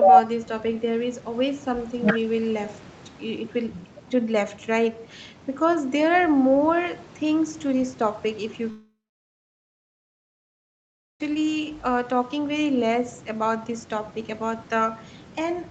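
From 8.70 to 11.21 s the speech stops for about 2.5 s, a long network dropout being the likely cause. A brief fading buzz continues the last sound, then silence fills the rest. Unlike short packet-loss glitches, speech resumes later with that stretch simply gone, still capped near 8 kHz.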